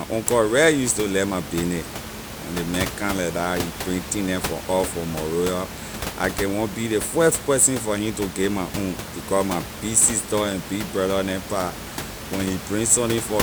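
No technical faults can be heard in this recording.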